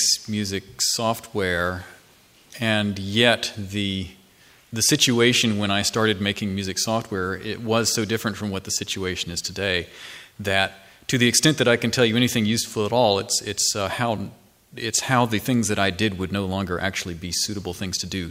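Nothing stood out as a technical problem on listening to this audio.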